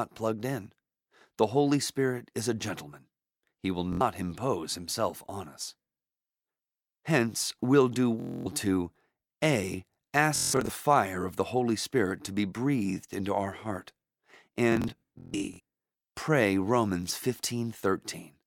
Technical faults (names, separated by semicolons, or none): Bluetooth stutter